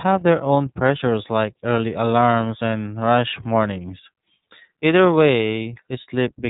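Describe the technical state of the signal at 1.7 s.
At 1.7 s the speech carries the iLBC codec's signature, as it does for the whole clip. The band stops at 4 kHz, so sibilants and breath lose their top end. The codec codes each 30 ms frame's excitation on its own, without drawing on the previous frame. That leaves a rough, slightly synthetic texture that is plainly audible here. The grain fits the 13.33 kbps mode.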